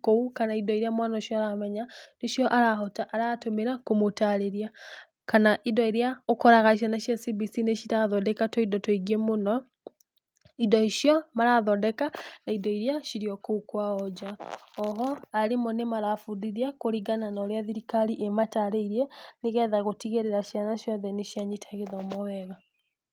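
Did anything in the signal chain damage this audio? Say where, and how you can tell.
No, nothing along the way seems to have damaged this speech, so there's no stage to point to.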